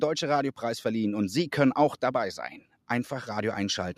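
From 2.61 to 2.89 s the noise suppressor cuts into the sound itself, treating part of it as noise and pulling it down by about 12 dB at the deepest point, with roughly 150 ms affected in total. This kind of cut hits steady or fading sounds hardest, while sudden sounds mostly come through. Unlike a dropout, the level dips without falling silent, and the surrounding audio keeps its normal level.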